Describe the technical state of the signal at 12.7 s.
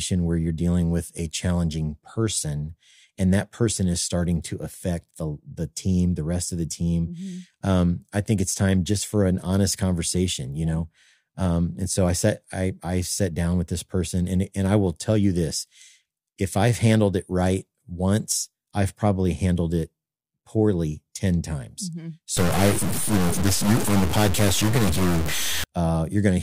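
At 12.7 s the speech signal is intact, with no audible technical fault at that moment.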